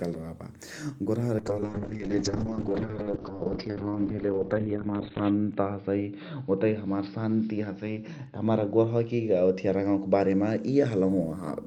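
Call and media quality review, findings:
Speech muffled and rough, highs gone, 1.39 to 11.15 s. Call bitrate drop: encoder cut from 32 to 9 kbps, audio band narrowed from 20 to 4 kHz, bottoming out for 3.8 s.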